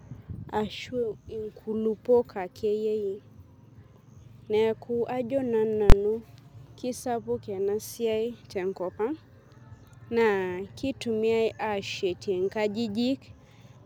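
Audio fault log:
5.90–5.92 s, invalid numbers at full scale: for about 23 ms the output is pinned flat at one extreme value, far beyond the speech's peaks, which fits a 1024-sample block where a calculation went infinite or invalid. The block is short, so it sounds like one harsh bang rather than a small click or a silent dropout.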